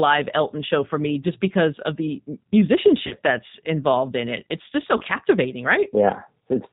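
A speech recording passed through the G.729 codec, at a low rate consistent with its 8 kbit/s mode. It models the voice as a vocal tract filter driven by a pitch predictor and a few pulses per frame, so the whole clip is band-limited to 4 kHz and plainly audible as rough, slightly synthetic speech. Nothing above that edge survives. Twice the stream also suffers VoIP packet loss concealed by the speech codec. From 3.07 to 3.15 s, 40 ms of audio went missing, which fits two consecutive lost packets. From 4.97 to 5.02 s, 20 ms went missing, pointing to a single packet. In each gap the decoder reuses its last pitch and filter settings at falling gain, so the speech is stretched into a fading buzzy tone or coloured noise. Because each frame depends on the one before, the voice stays weak and distorted briefly after the stream resumes.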